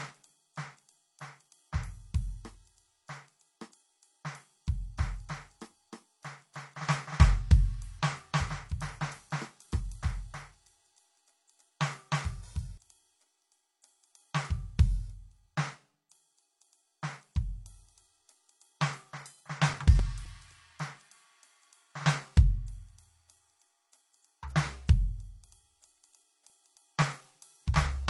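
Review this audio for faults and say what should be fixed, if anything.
Transcoding between lossy codecs runs through the whole music clip. Everything above 11.4 kHz is missing, and smeared, swirly artefacts sit on top of it, likely from a low-rate MP3 re-encoded to HE-AAC. A spectrogram shows a hard ceiling and blotchy upper bands. Prevent it by encoding once from the original master.

A doubled audio track runs from 4.97 s to 12.77 s. A full-band copy, about as loud as the original, follows about 300 ms behind with no room colour, likely from a second, slower capture path. The waveform shows repeated transients and abrupt edges. Prevent it by removing the duplicate path or stale edit layer.

CD scratch ticks occur in two bursts. The first has seven ticks between 19.21 s and 20.78 s, the longest about 5 ms. The second has ten ticks between 25.20 s and 27.54 s, none longer than about 3 ms. 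A disc blemish defeats error correction on each turn, so the player interpolates or mutes samples. These appear as thin vertical lines and tiny flat gaps. Prevent it by re-ripping from a clean disc with a secure ripper.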